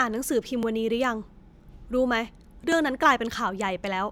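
At 0.63 s and again at 2.72 s, the speech has a repeated buffer. New audio arrived late, so the last 1.33 ms piece played once more, which fits a 64-sample buffer. Each repeat is so brief that it sounds like a small click rather than a stutter.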